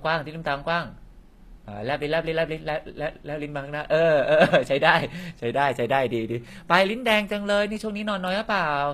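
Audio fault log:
Throughout, HE-AAC compression: likely a low-bitrate encode, fitting about 24 kbps, that rebuilds treble from copied lower bands, leaving plainly audible grit and nothing above 14.9 kHz.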